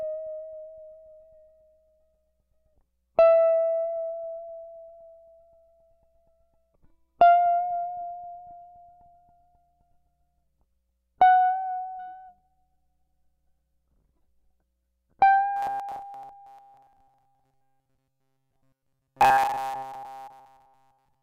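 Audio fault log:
15.57–21.23 s, robotic sound from repeated short buffers: the music collapses into a rigid, metallic buzz locked at 133 Hz for the whole stretch. Likely, new audio arrived too seldom and a fragment of about 7.5 ms was looped, its repetition rate setting that pitch.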